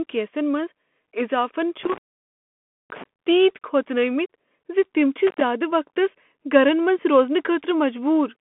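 Throughout, the speech runs through a Bluetooth CVSD headset codec, consistent with a 64 kbit/s link. Its one-bit slope coding confines the audio to roughly 200 Hz–3.4 kHz with nothing above 3.8 kHz, leaving scratchy sibilants and granular hiss. An intermittent contact then opens the line from 1.84 to 3.04 s, cutting the sound for about 0.92 s with crackle at both edges. It opens again from 5.27 to 5.41 s, an 85 ms dropout between "تم چھ" and "وقتس گرن منز".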